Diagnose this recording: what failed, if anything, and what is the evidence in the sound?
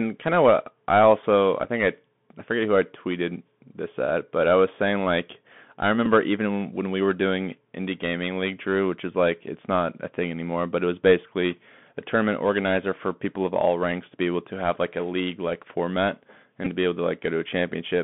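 The Bluetooth CVSD headset codec colours the speech for the full length of the recording, a codec-stage fault. The band runs only from about 150 Hz to 3.5 kHz, and the damage is plainly audible: scratchy sibilants, a granular hiss beneath the speech, and roughness on loud bright sounds. CVSD codes each sample as a single up-or-down bit with an adapting step, which fits a 64 kHz one-bit stream that cannot follow fast, loud high-frequency movement.

The Bluetooth headset packet repeated fault, on the radio link between headset and phone, shows as short buzzy glitches at 1.64 to 1.69 s, at 6.06 s, and at 16.65 to 16.68 s. When voice packets fail to arrive, the chip decodes the previous packet's bits again. At 3.75 ms per packet, the repeats make a brief rasp near 267 Hz. The first two gaps fit about 7.5 ms, or two packets, and the last fits about 15 ms, or four.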